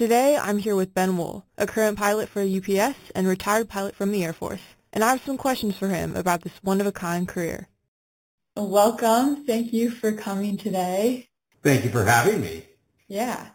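Imaging from sample-and-hold upsampling runs throughout the speech. The audio sounds as if it began at 8 kHz and was raised to 48 kHz by simply repeating each sample, with no smoothing filter to remove the mirrored spectrum. The first image fills the 4 to 8 kHz band at about -16 dB relative to the signal. It is heard as a bright, metallic fizz that swells and fades with the speech, and its lowest copy moves opposite to the pitch.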